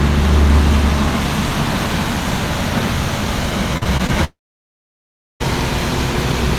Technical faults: repeated packet loss (robotic sound); long network dropout

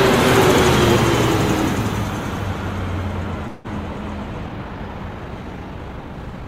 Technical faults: call audio freeze; time-stretched section

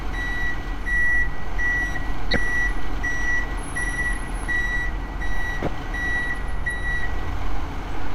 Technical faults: corrupt frame decoded

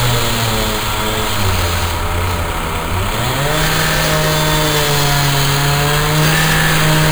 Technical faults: imaging from sample-and-hold upsampling

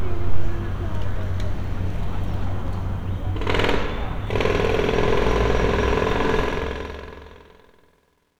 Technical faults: truncation distortion on a fade

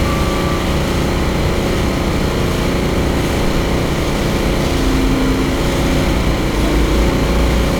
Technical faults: 1-bit DFPWM compression

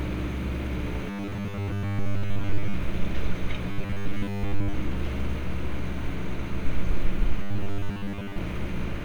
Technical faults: robotic sound from repeated short buffers

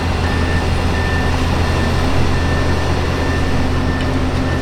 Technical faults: wrong sample rate

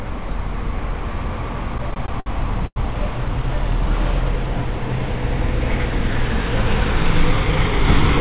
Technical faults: repeated stalls (stutter); call audio freeze

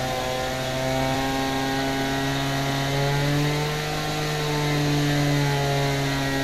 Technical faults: damaged data in a compressed stream

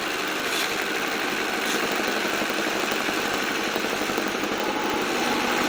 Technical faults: filter restarted on every block

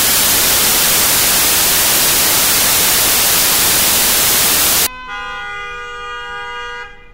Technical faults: samples built from the wrong bytes

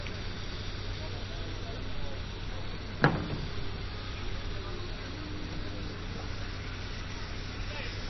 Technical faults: MP3 compression

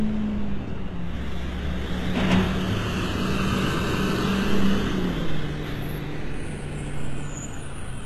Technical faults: HE-AAC compression

